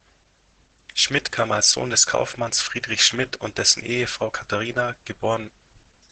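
Opus voice compression runs throughout. Nothing survives above 8.7 kHz, and heavy coarse coding leaves the speech muffled, hoarse and slightly robotic, suggesting roughly 10 kbps.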